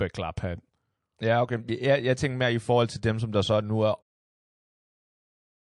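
A speech clip with plainly audible MP3 compression damage throughout: watery, swirly sibilants and smeared attacks, likely from a low bitrate around 48 kbps. A spectrogram would show a flat treble ceiling and flickering high-frequency holes. The smooth fade-out near the end, from about 4 s to 4.03 s, tapers cleanly on the waveform.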